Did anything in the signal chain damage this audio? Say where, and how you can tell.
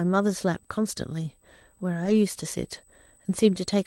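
Yes. A USB whine runs through the whole clip, entering in the analogue wiring: a steady tone at 8 kHz, sitting roughly 35 dB below the speech. Its fixed pitch at exactly 8 kHz matches the 125-microsecond microframe rate of a high-speed USB bus. The current the bus draws in each microframe pulses the shared power or ground, and that ripple reaches the audio path as a constant high whine.

The second fault is a lost packet rebuilt from error correction, a network-stage loss handled by the codec. From 2.05 to 2.11 s the speech turns briefly rougher and noisier with no dropout. That stretch sounds like about 40 ms of rebuilt audio, which fits two lost 20 ms packets. Each following packet carried a low-bitrate backup copy, Opus in-band forward error correction, and the decoder played those coarser copies in place of the missing frames.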